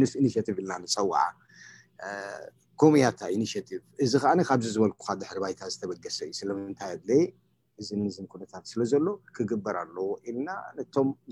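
Nothing in the clip stood out as a problem on listening.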